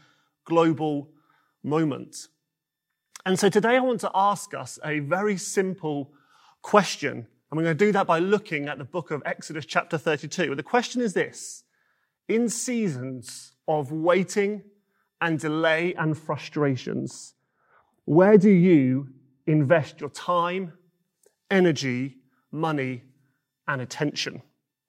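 From 15.93 to 20.01 s, after "of waiting and delay" and before "your time", de-emphasis applied wrongly smoothly rolls off treble, about 11 dB down at 10 kHz, muffling the speech gradually rather than with a low-pass filter's abrupt cutoff.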